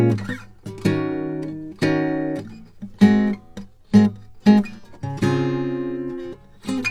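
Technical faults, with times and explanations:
No technical faults can be heard in this music clip. There is nothing to time or explain.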